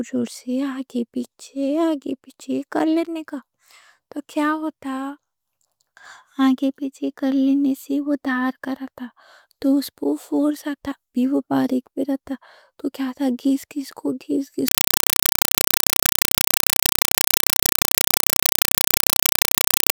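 A compressed stream played as audio takes over at 14.68 s and runs to the end at 19.94 s. The speech is replaced by loud, chattering static: short bursts of noise about 4 ms long, separated by silence and repeating 31.25 times a second. This pattern points to an AC-3 (Dolby Digital) bitstream reaching the output undecoded, with each coded frame's data heard as raw noise and its zero padding as the gaps.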